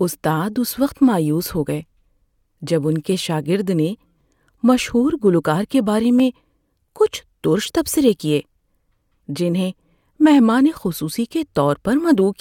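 At 4.21 s, after "ان کے شاگرد نے", at 6.20 s, after "گلوکار کے بارے", and at 8.20 s, after "کچھ تُرش تبصرے", the speech has a brief click or skip. This is overlap between stream segments. Adjacent 2 s segments overlap in time, and trimming the overlap discards 5 to 18 milliseconds of genuine audio, so the waveform jumps at each boundary.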